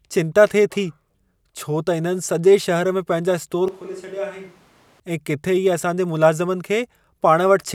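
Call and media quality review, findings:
Switch to a distant microphone, 3.68 to 5.00 s, right after "में पंहिंजा स्टोर". Speech turns abruptly roomy and hollow, thin low end, level down about 10 dB, room noise rising to roughly 25 dB below the speech. Hard cut in and back out. Likely cause: close-mic feed dropped and the mix fell back to a far pickup, such as a camera mic, capturing more reverberant room sound and less direct voice.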